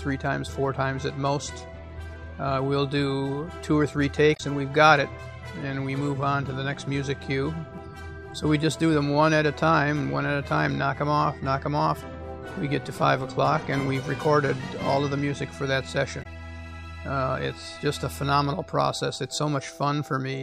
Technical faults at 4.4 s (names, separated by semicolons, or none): damaged data in a compressed stream